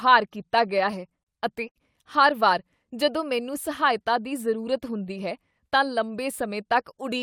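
Repeated stalls (stutter) run from 0.67 to 1.28 s, just before "ਅਤੇ ਹਰ ਵਾਰ ਜਦੋਂ". Packets reached the receiver late, so its jitter buffer ran dry six times in that stretch. Each time, the receiver held the last sound until it could continue, adding about 86 ms in all (roughly 14% of the span), with the longest hold 33 ms. No speech is lost, but the phrase drags in small catches and sounds hesitant.

A short stall from a late packet follows at 1.68 to 1.78 s, just before "ਹਰ ਵਾਰ ਜਦੋਂ ਮੈਨੂੰ". One packet missed its playout time, the buffer emptied, and the receiver stretched the preceding sound for 71 ms until the packet arrived. Playback then resumed from where it had stopped, now 71 ms later than before. Nothing is missing, but one sound is held too long, with a faint buzz or slight dip.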